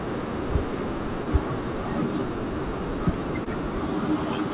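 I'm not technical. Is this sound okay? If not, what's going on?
No. At 1.24 s and again at 3.44 s the speech briefly smears or wobbles for a few hundredths of a second. This is short concealed packet loss: a bit of call audio arrived too late, so the receiver covered the gap by stretching the surrounding sound. The call line also cuts everything above 4 kHz, giving a telephone-like tone.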